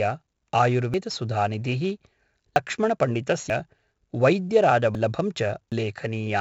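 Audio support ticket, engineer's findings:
4-bit ADPCM compression throughout the speech: gritty hiss riding on loud passages, smeared attacks; heavy coding damage consistent with a 64 kbps stream.

Audio jumping forward at 0.94, 2.56, 3.50, 4.95 and 5.72 s, roughly 100 ms lost each, about 300 ms at 5.72 s; likely dropped buffer (overrun), capture falling behind hardware.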